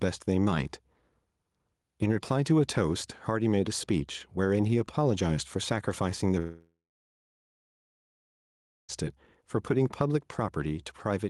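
Gain pumping runs through the speech: the gain swings by roughly 5 dB, pulled down under each loud syllable so loud and soft parts end up closer in level, likely from excessive input gain hitting a fast limiter. A long network dropout spans 6.39 to 8.91 s: a fading buzz or hiss briefly continues the last sound, then about 2.1 s of silence, with roughly 2.5 s of audio likely lost in transit.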